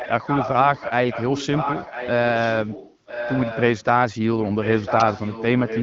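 From the start to 0.92 s, and again from 1.1 to 2.11 s, a second copy of the speech trails the original by almost exactly one second, only about 5 dB quieter. That is an echo leak, most likely from a loudspeaker at the far end whose echo canceller let its microphone pickup through. Unlike room reverberation, which smears sound over a decaying tail, this is a distinct repeat at one fixed delay.

Between 1.82 and 1.88 s, still inside that stretch, the speech briefly turns hoarse and gargly. These are AMR bit errors: flipped low-priority bits misplace the excitation pulses and skew the fine pitch, gain and spectral values over a span that fits about three codec frames. Unlike packet loss, there is no gap or fade, since pitch and level hold while the texture goes scratchy. Elsewhere the HD Voice coding at 12.65 kbit/s sounds clear.

The same one-second echo returns from 2.34 to 3.84 s and from 4.39 s to the end, now about 10 dB below the speech. 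It is fainter but still a fixed-delay copy.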